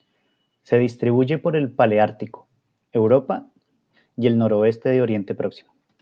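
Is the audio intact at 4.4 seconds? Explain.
Yes, the audio is intact at 4.4 seconds, with no fault at that moment.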